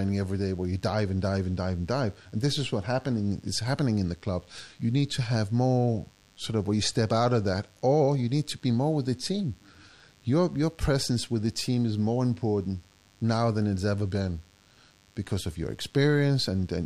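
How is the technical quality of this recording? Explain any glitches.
The recording has one technical fault. A DECT cordless phone buzz runs under the speech from start to finish. It is a thin, steady buzz with a hard edge. Nearby DECT equipment sends a short radio burst 100 times a second. The audio circuit picks this up and rectifies it, so each burst becomes a small click. Together the clicks form a 100 Hz tone with many harmonics. It sits about 35 dB below the speech.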